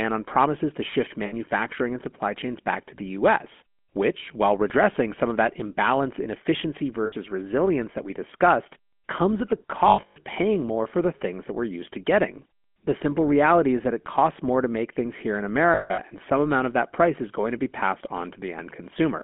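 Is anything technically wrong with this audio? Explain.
Yes. Throughout, the GSM full-rate codec gives the speech a buzzy, gravelly roughness and cuts everything above 3.4 kHz, which fits 13 kbps coding. Unlike plain band-limiting, it adds grit.

Lost GSM frames occur at 1.26–1.34 s, at 7.06–7.13 s between "that imbalance in efficiency" and "resilience that we discussed", at 9.88–10.22 s, and at 15.74–16.0 s. Each time the last good frame repeats, giving a short metallic ring instead of the silent gap a plain dropout would leave.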